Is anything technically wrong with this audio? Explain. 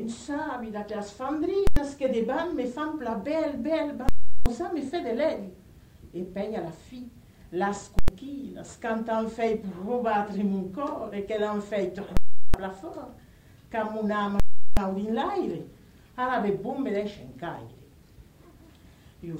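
Yes. Invalid numbers at full scale occur at 1.67, 4.09, 7.99, 12.17 and 14.40 s. Infinite or invalid values were clamped to the largest sample value. The 93 ms blocks at 1.67 and 7.99 s, which fit a 4096-sample block, land as single bangs. The 372 ms blocks, which fit 16384 samples, give a loud pop, silence, then another pop. On a waveform each block is a flat rail at one extreme value, far beyond the audio's peaks. A spectrogram shows bright broadband vertical lines at each edge with an empty gap between.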